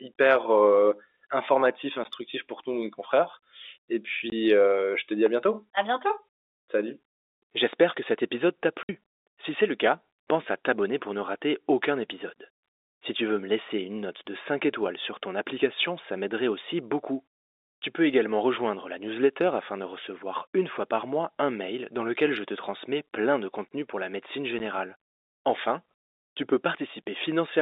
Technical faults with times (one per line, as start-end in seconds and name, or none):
2.04 packet loss filled with silence
4.30-4.32 packet loss filled with silence
8.83-8.89 packet loss filled with silence
24.59 packet loss filled with silence